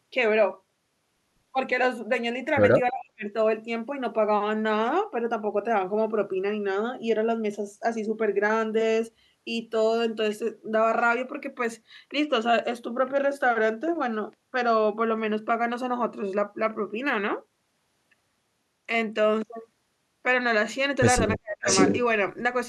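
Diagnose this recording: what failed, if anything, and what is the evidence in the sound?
The call processing stage failed twice with speech suppressed in double talk. From 2.91 to 3.26 s and from 21.37 to 21.67 s the speech sinks sharply, about 40 dB at its deepest, for under half a second each time, then recovers. The likely cause is an echo canceller that could not tell local speech from loudspeaker echo while both sides talked, so it clamped everything. Unlike a network dropout, the level dips rather than going to digital silence.

The same call processing stage also shows echo leak, likely from a loudspeaker whose canceller passed residue back. At 3.00 to 3.04 s a faint delayed copy appears about 314 ms behind the speech, around 25 dB down. At 21.65 to 22.01 s a longer copy arrives 593 ms late at roughly the same level as the speech. The long, uneven delays and the near-full-level return set this apart from room reverberation, which would trail the speech smoothly and much sooner.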